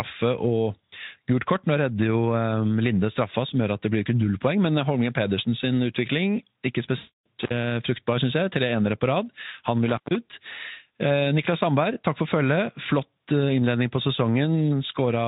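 From 6.97 to 7.28 s the speech is hit by VoIP packet loss concealed by the speech codec. About 280 ms of data is missing, which fits roughly fourteen 20 ms frames. The decoder fills the gap by repeating its last pitch and filter at falling gain, so the sound smears into a buzzy, fading tone rather than stopping. Because each rebuilt frame feeds the next, the recovery is soft and gradual instead of abrupt.

An intermittent contact follows at 7.42 to 7.54 s, with the line open for about 54 ms, and again at 9.88 to 10.16 s, open for about 137 ms. Here a loose connection briefly breaks, so the sound drops out at once, with crackle at both edges and faint hiss during the gap. That hard cut and its clicks set it apart from the concealment's fading buzz. The Speex coding at 18.2 kbps adds little or no audible damage of its own around these events.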